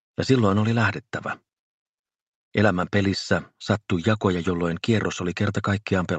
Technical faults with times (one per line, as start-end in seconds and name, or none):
none